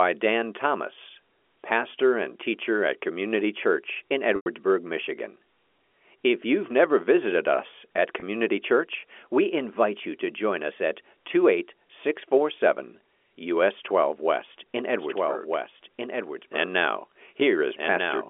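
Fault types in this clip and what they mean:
Packet loss with pitch repetition: The receiver covered missing audio by looping the last pitch cycle and fading it. The gap at 4.36 s runs about 100 ms, enough to hear a held buzz sinking toward silence. The one at 8.2 s is about 20 ms, just a brief buzzy stretch.
Doubled audio track: From 15.0 s to the end, a second full-band copy runs about a second and a half behind, a few dB quieter, with no room colour and an abrupt start. It's likely a second, slower capture path mixed into the G.711 telephone-band line.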